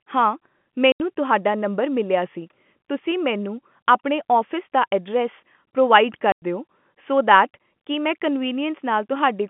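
At 0.92 s and again at 6.32 s the speech drops into dead holes of 80 ms and 100 ms, with hard edges, just before "ਤੁਹਾਡਾ ਨੰਬਰ ਮਿਲਿਆ ਸੀ" and "ਦਿਓ ਸੋ". This is packet loss filled with silence; the gap lengths fit 20 ms packets, over a band-limited G.711 telephone line.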